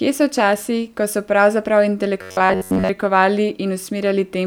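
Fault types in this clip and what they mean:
robotic sound from repeated short buffers: from 2.22 to 2.89 s, just after "časi ko so pravzaprav", the speech turns into a rigid, metallic buzz at 93.8 Hz that only loosely follows the syllables. That pitch matches a chunk of about 10.7 ms being replayed back to back, most likely because new audio arrived too seldom and playback filled the gap with repeats. The real signal is lost for most of that stretch.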